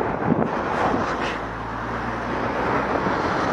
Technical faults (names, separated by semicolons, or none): damaged data in a compressed stream